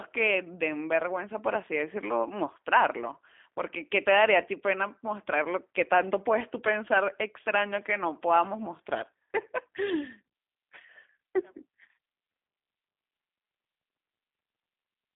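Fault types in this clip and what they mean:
G.729 codec: the speech is rebuilt from a vocal tract model, pitch predictor and sparse pulses, so it sounds plainly rough and synthetic, not merely muffled as with a telephone filter. The band is 250 to 3500 Hz, nothing passes above 3.6 kHz, which fits 8 kbit/s G.729A.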